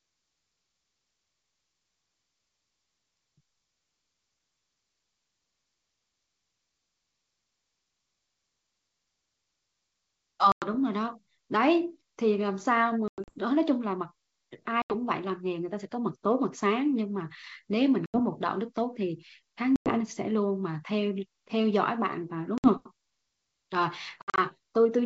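Packet loss on an ADPCM call cuts hard-edged silent holes into the speech at 10.52 s (about 100 ms), 13.08 s (140 ms scattered over 200 ms), 14.82 s (80 ms), 18.06 s, 19.76 s (100 ms), 22.58 s (60 ms) and 24.22 s (120 ms over 160 ms). The speech resumes with brief, slight distortion, because the decoder's predictor and step size must re-track. That rough recovery separates it from a simple dropout, against G.722's clear wideband background.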